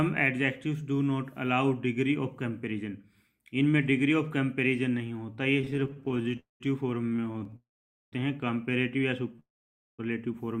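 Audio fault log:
5.61–6.39 s, repeated stalls (stutter): The sound keeps catching and restarting, with 21 brief holds totalling 240 ms (about a third of the span, the longest only 26 ms). The jitter buffer repeatedly runs dry and the last sound is stretched each time. Nothing is skipped, so it drags rather than jumps.
6.39–6.62 s, call audio freeze: The sound hangs for about 207 ms, fading into roughly 140 ms of silence, then resumes exactly where it stopped. This is likely packets held up in transit. Unlike the stutter, it is one sustained halt that decays to quiet, not a string of tiny catches.
7.02–7.54 s, repeated stalls (stutter): Another run of 13 short holds totalling 162 ms, none longer than 18 ms, again about a third of the span. The buffer keeps emptying and the receiver fills each hole with a stretch of the preceding sound, leaving a halting, dragged texture with no content lost.
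7.56–8.14 s, call audio freeze: A longer halt of about 558 ms. The held sound fades quickly and about 480 ms is silent before the audio carries on from the same point. The long silent stretch, rather than a held buzz, marks it as a freeze and not a brief stall.
9.36 s, short stall from a late packet: One packet arrives late, so the sound just before it is held for about 17 ms, heard as a slight smear or dip. It is a single isolated hold, far shorter than a freeze and without the repetition of a stutter.
9.40–10.00 s, call audio freeze: Immediately after that stall, the audio stops for about 587 ms. The held sound fades and about 530 ms is silent, then playback resumes where it left off. The delay added here is the longest in the clip.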